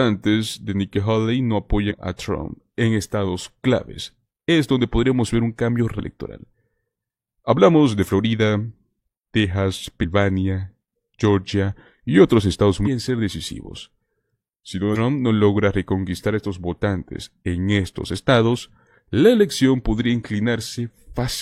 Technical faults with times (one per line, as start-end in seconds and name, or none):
1.86-1.92 damaged data in a compressed stream
9.99-10.05 damaged data in a compressed stream
12.82-12.88 damaged data in a compressed stream